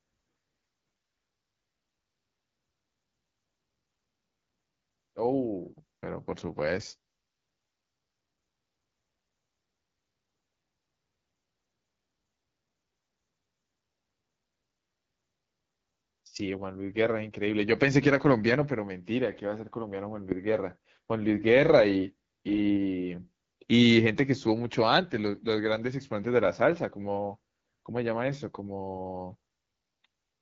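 From the start to the end, the speech carries AMR wideband (HD Voice) codec damage. It sounds rough and raspy because the pulse-driven vocal tract model is starved of bits, which fits the low 8.85 kbit/s mode. Above 6.4 kHz there's only a shaped-noise fill.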